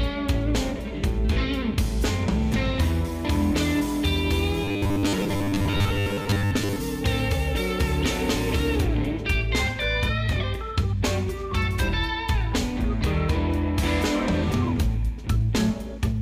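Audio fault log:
4.64–6.76 s, robotic sound from repeated short buffers: the sound turns rigid and metallic under a steady 100 Hz buzz. That's likely a 10 ms chunk being replayed while fresh audio runs late, so about half this stretch is repeats, not new material.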